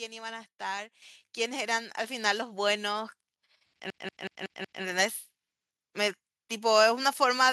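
At 1.02 s the microphone volume steps up by about 8 dB, then again at 2.04 s by about 4 dB. The software is raising the input gain in single jumps, so the voice and the room noise lurch louder together, with no gradual ramp.

From 3.90 s to 4.83 s there's a system hang loop. The machine stalled while the audio hardware kept replaying one 186 ms chunk, which fits an 8192-sample buffer. It repeats five times at about 5.4 Hz, a choppy machine-gun stutter, and hardly any audio goes missing.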